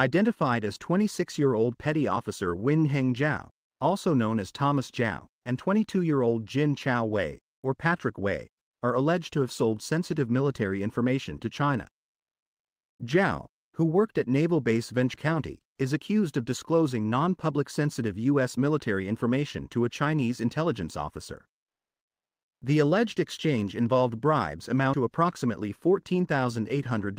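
At 5.34 s and 15.14 s the sound skips abruptly, with the material on either side butted together and no gap. These are audio missing between chunks, likely from a recorder or processor dropping about a fifth of a second each time it closes one 10 s block and opens the next.

From 22.59 to 22.61 s a sound begins hard, without its soft attack. This is an onset clipped by the voice detector, likely a discontinuous-transmission scheme such as Opus DTX reacting late and discarding the first 20 ms.

At 24.94 s the same chunk-boundary skip recurs, again on the 10 s spacing.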